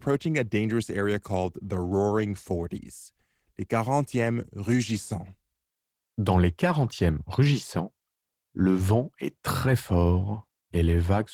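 No technical faults can be heard in this speech recording.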